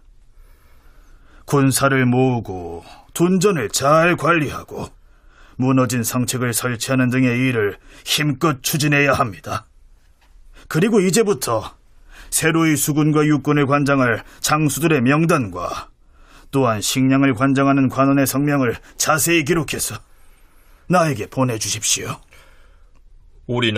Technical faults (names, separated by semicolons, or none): none